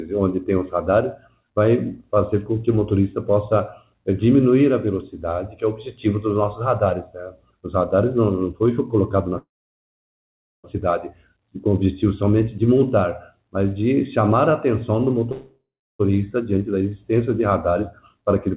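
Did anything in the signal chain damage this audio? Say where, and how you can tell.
Yes. At 9.38 to 10.66 s and 15.32 to 16.01 s, the sound stalls into a fading tail and then silence: about 1.17 s of silence in the first and 0.36 s in the second. It resumes where it left off. This is a call audio freeze, likely from network packets arriving late and draining the jitter buffer, which inserted 1.26 s and 0.68 s of delay.

Two hurried stretches follow, at 16.15 to 16.53 s running at 108% and at 18.14 to 18.56 s at 110%, with pitch unchanged. This is jitter buffer speed-up. The receiver trimmed pitch-period slices, roughly 40 ms and 50 ms, to cut the delay built up after the stalls.

From 16.58 to 16.91 s the sound drags at 87% speed, stretched but at the same pitch. This is jitter buffer slow-down. The buffer repeated single pitch periods or bits of pauses, adding 51 ms to rebuild its reserve, all within a G.711 A-law path that stops at 4 kHz.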